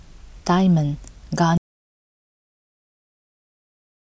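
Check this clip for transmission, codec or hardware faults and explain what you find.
An audio dropout to silence begins at 1.58 s and runs to the end of the clip. The speech stops abruptly mid-flow and what follows is silence, with no room tone or background hiss underneath. That total absence points to the input itself being lost, likely a disconnected device, a failed link or an accidental mute, while the recorder kept writing silence. Whatever was spoken after 1.58 s is simply not there.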